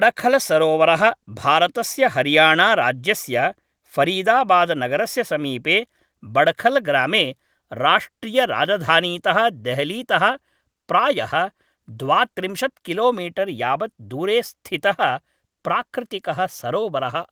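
A speech recording with nothing technically wrong with it.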